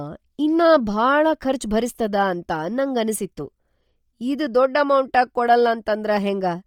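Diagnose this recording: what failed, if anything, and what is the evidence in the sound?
The codec stage failed, most likely through Bluetooth LC3 compression. Across the whole speech clip the upper spectrum turns breathy and grainy where zeroed bands are noise-filled, with heavy codec damage that fits roughly 32 kbps and 10 ms transform frames, though content still reaches about 20.2 kHz.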